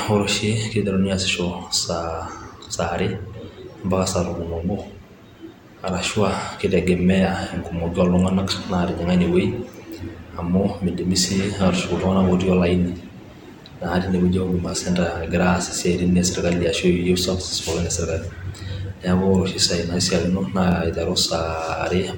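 At 2.65–2.67, 8.67–8.69, 14.69–14.72 and 20.72–20.74 s, overlapping chunks replay 23 ms every 6 s. Each join sounds like a stutter-click and shows as duplicated waveform and a vertical spectrogram seam.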